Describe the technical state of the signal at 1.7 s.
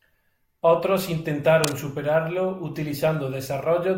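Cable scratch noise runs from 1.63 to 1.80 s. Dense, uneven rustling sits just below the speech level. A moving worn connector is likely varying its contact.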